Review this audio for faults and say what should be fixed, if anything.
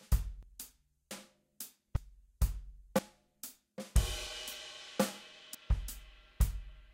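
The sound jumps ahead with no gap at 0.43, 1.11, 1.96, 2.99, 4.27 and 5.55 s. Each jump skips about a tenth of a second, except about 0.3 s at 1.96 s and 0.15 s at 5.55 s. The cause is likely a dropped buffer (overrun). Unlike an underrun, no silence is inserted. Audio is simply missing and the two sides are joined. To fix it, read the capture buffers promptly, using a higher-priority audio thread or larger buffers.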